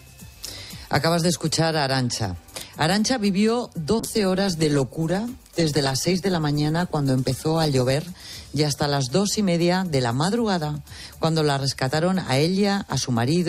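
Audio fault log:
4.0–8.01 s, call bitrate drop: audio turns coarse and muffled with high frequencies cut, which fits the encoder falling from about 128 kbps to 20 kbps.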